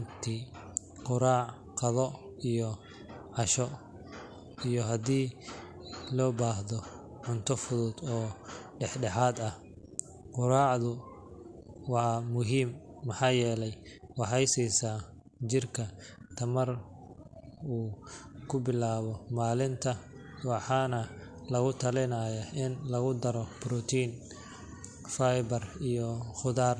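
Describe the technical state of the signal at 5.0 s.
At 5.0 s the speech signal is intact, with no audible technical fault at that moment.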